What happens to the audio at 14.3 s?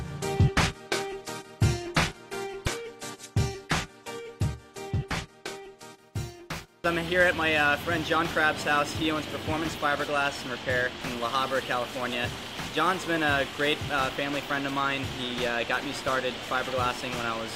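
Nothing goes wrong at 14.3 s: the audio carries on intact through that moment, with no dropout, click or other technical fault to be heard.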